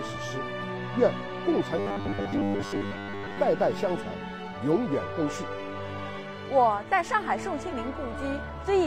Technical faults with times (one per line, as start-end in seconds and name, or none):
1.77-3.37 robotic sound from repeated short buffers